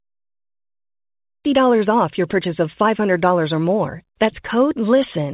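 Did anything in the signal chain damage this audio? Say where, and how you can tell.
No, nothing in the signal chain stood out as damaging this speech on listening.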